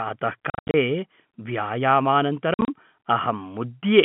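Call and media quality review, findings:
Packet loss filled with silence, 0.50–0.74 s and 2.54–2.68 s. Speech chopped by hard-edged holes: 190 ms lost over 240 ms, then 90 ms over 140 ms. Longest holes 80 ms and 50 ms. Gaps fit 10 ms packets. Receiver inserts silence.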